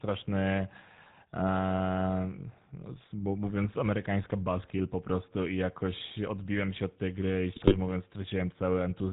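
Speech heard through the GSM full-rate codec for its whole length, with plainly audible damage: the buzzy, gravelly roughness of a vocal-tract model driven by regular pulses from a thinned excitation, consistent with a 13 kbps rate. On a spectrogram, energy stops sharply at 4 kHz, leaving the upper band empty, and the harmonics look smeared and grainy rather than clean. From 7.56 to 7.76 s, right after "od tej gry i", GSM bit errors break the sound into squawks, pops and gargling. Corrupted filter, pitch and gain values distort the spectrum and push the level up frame by frame. Across that 0.2 s the waveform shows abrupt jumps in amplitude, and the spectrogram shows blotchy, misplaced bands, a pattern that points to several damaged frames.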